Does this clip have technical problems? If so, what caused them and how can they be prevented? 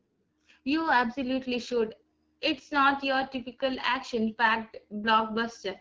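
Yes. AMR wideband (HD Voice) coding runs throughout at 8.85 kbit/s, one of its lowest rates. The sparse pulse model leaves the speech rough and raspy. Use 12.65 kbit/s or higher.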